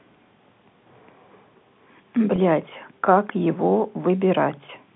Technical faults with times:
2.36-2.38 packet loss with pitch repetition

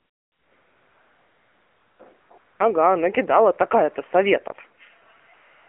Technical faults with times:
0.00-5.68 AMR narrowband mobile codec
0.00-2.60 AMR comfort noise
5.26-5.68 AMR comfort noise

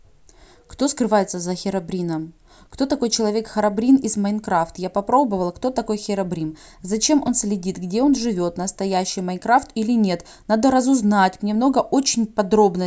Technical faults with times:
7.27 block of digital silence

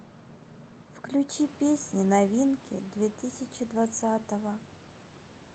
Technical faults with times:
none

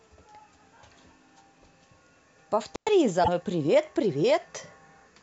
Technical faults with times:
2.74-2.88 intermittent contact
3.20-3.29 damaged data in a compressed stream

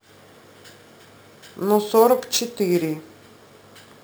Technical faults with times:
0.00-4.03 imaging from sample-and-hold upsampling

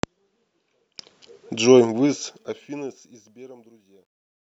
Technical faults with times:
1.80-4.49 truncation distortion on a fade

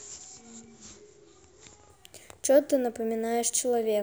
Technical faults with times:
1.90-4.02 imaging from sample-and-hold upsampling

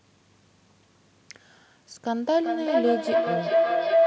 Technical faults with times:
2.15-4.07 feedback howl

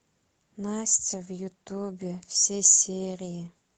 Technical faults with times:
none

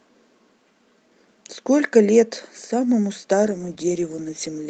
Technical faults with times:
3.44-4.69 call bitrate drop

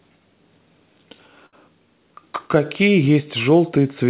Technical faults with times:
1.46-1.55 short stall from a late packet

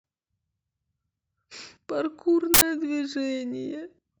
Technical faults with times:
2.54-2.62 uninitialised buffer

